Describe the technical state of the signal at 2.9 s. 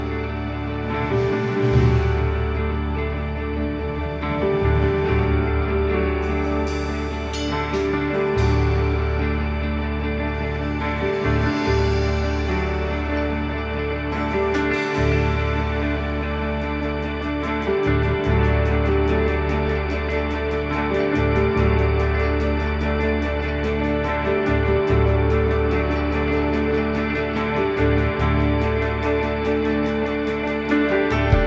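At 2.9 s the signal is intact, with no audible dropout, clipping, distortion or other fault.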